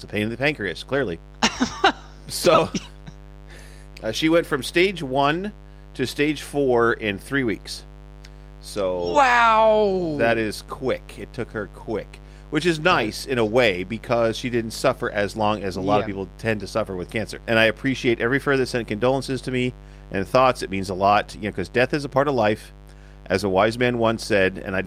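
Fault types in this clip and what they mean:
Mains buzz, throughout the clip: sharp switching spikes, repeating twice per 50 Hz cycle, leak into the signal path and build a dense ladder of 50 Hz harmonics, heard as a constant raspy buzz roughly 20 dB below the speech.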